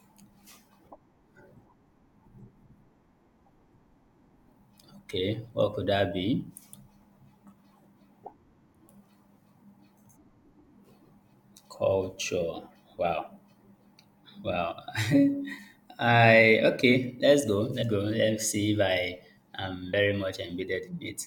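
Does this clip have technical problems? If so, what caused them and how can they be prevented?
Yes. Compressed frames are skipped at 14.12, 15.57, 17.81 and 19.92 s. The audio jumps ahead by roughly 40, 20, 150 and 100 ms. This fits whole frames of 21.3 ms. To prevent it, verify the file's integrity and re-encode or re-transfer it.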